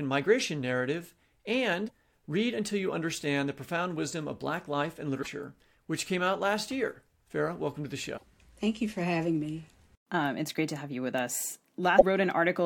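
Four short blips break into this speech recording, at 1.84 to 1.91 s, 5.19 to 5.27 s (just before "which came out last"), 8.14 to 8.23 s (right after "welcome to the") and 11.95 to 12.03 s, each lasting under a tenth of a second. They come from damaged data in a compressed stream: corrupted bytes make the decoder misread those frames and lose sync until it finds the next valid frame header.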